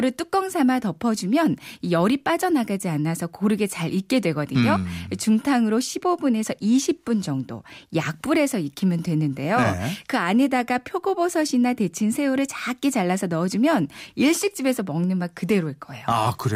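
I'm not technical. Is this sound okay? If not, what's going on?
No. Channel delay (comb filtering) affects the speech from 5.31 to 7.90 s. One side of the stereo signal runs a tiny fraction of a millisecond behind the other, about one sample. When the two sides are mixed together, some frequencies cancel out. With a gap this small, the first cancelled frequency sits around the very top of human hearing, near 20 kHz, so the effect is a dulling of the crispest high end.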